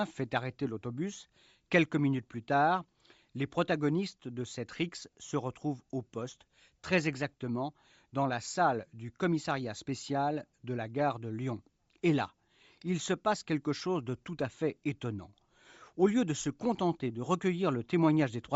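Throughout the speech, a plainly audible breathy, grainy edge sits on the sound, likely from Bluetooth LC3 compression, which fits a 32 kbps stream in 10 ms frames. Upper detail is replaced by noise, so a spectrogram shows speckled, blocky high frequencies.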